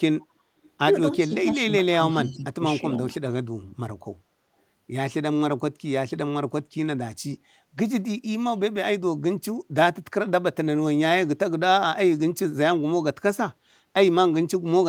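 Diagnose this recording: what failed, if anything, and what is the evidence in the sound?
Echo leak in call processing, likely a loudspeaker whose echo canceller left residue. A faint copy of the speech trails it by 334 ms at 0.63–0.70 s and 2.11–2.31 s, roughly 35 and 25 dB down. A spectrogram shows a weak duplicate of the harmonic pattern shifted right.

Speech suppressed in double talk, also in call processing, likely the canceller ducking the near talker while both sides overlapped. Level sinks at 1.18–1.6 s, 1.82–1.92 s, 2.14–2.64 s and 3.07–3.14 s, by roughly 10, 10, 25 and 5 dB. The waveform envelope shows notches; the spectrogram, fading bands.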